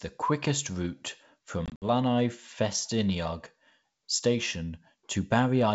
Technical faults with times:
1.66-1.85 packet loss on an ADPCM call

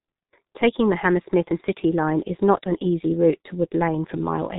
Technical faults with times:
0.00-4.59 G.723.1 codec

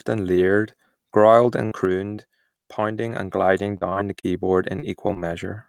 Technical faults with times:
1.65-1.73 burst of packet loss
2.15-2.19 short concealed packet loss
3.63-4.25 repeated packet loss (robotic sound)
4.79-4.84 short concealed packet loss
5.14-5.18 short concealed packet loss

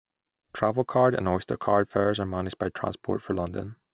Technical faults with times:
none

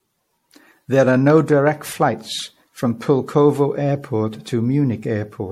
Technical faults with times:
0.00-5.51 generation loss

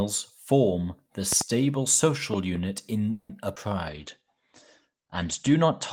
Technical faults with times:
1.32-1.43 loud pop
3.11-3.31 call audio freeze
3.55-3.58 short concealed packet loss
3.90-5.92 call bitrate drop

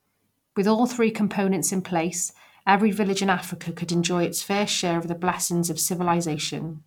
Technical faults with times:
3.04-6.87 periodic clock jitter

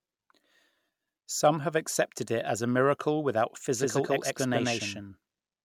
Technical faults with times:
3.75-5.65 doubled audio track

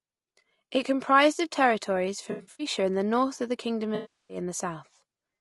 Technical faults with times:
0.00-5.41 low-delay AAC compression
2.31-2.67 AAC frame loss with concealment
3.95-4.37 AAC frame loss with concealment

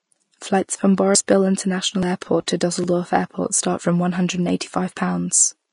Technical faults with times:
0.00-5.72 Vorbis compression
1.15 dropped buffer (overrun)
2.03 dropped buffer (overrun)
2.21 pre-echo
2.84 dropped buffer (overrun)

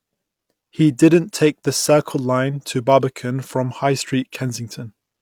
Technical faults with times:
none

